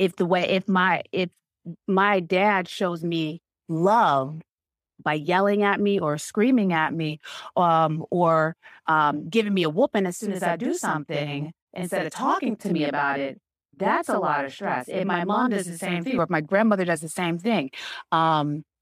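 From 10.19 s to 16.19 s, after "me a whooping as" and before "or if my grandmother", a channel delay (doubling) occurs: one channel runs 40 ms late and is summed to mono. The speech sounds doubled, with an equal-level slap trailing each syllable.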